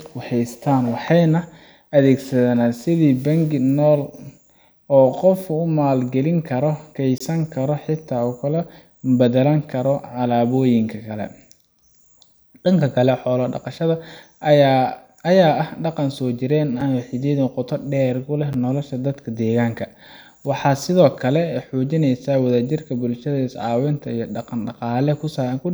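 Blocks of digital silence occur at 7.18 to 7.20 s, between "geli karo" and "karo xitaa ku kala", and again at 16.81 s and at 18.53 s, after "qoto dheer ku leh". Each time the output buffer likely went unfilled and the speech snapped to zeros without fading. The first is a 23 ms hole, consistent with a 1024-sample buffer. The others are 5.8 ms and 9.3 ms clicks.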